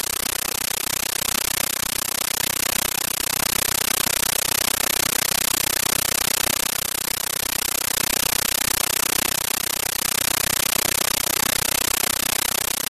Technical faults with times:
0.00-12.90 compressed stream played as audio

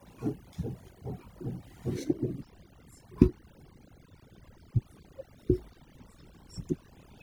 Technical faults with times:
0.00-7.22 overdone noise removal

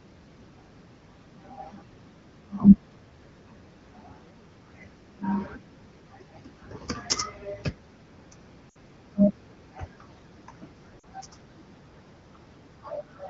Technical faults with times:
8.70-8.77 lost AMR speech frames
11.00-11.05 lost AMR speech frames

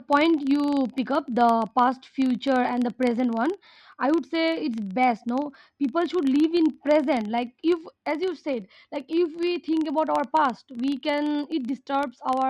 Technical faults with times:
0.00-12.49 filter restarted on every block

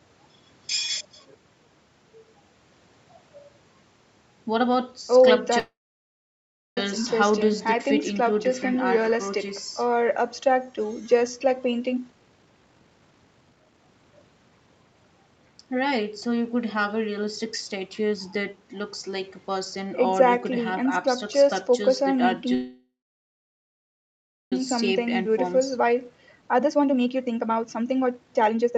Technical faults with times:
5.59-6.78 call audio freeze
11.89-14.91 jitter buffer speed-up
22.54-24.53 call audio freeze
24.95-28.77 jitter buffer speed-up

